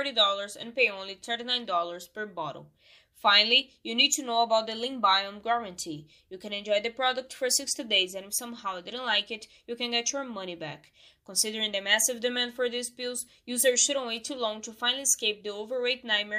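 Nothing stood out as a technical fault on listening.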